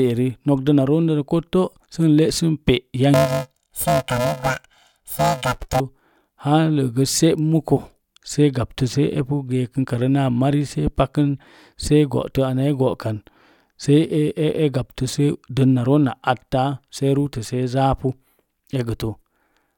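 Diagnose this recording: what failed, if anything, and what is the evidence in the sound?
Sample-format conversion slipped: planar audio read as interleaved from 3.14 to 5.80 s gives a robotic 375 Hz buzz, which fits 128-sample blocks played twice at double speed.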